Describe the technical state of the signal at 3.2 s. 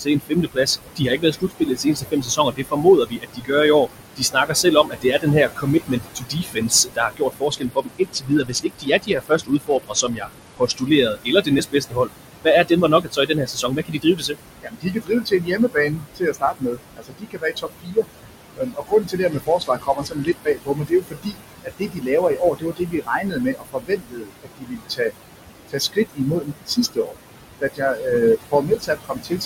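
At 3.2 s the sound falls within speech cut by the noise suppressor, spanning 0.0 to 3.53 s. The suppressor misreads quiet speech as noise and pulls it down by up to about 20 dB, so about two seconds of this opening sound faint and swallowed. Noise suppressor artifacts run through the whole clip: background bands are reduced by about 21 dB frame by frame, so the room noise sinks between the words and rises under them.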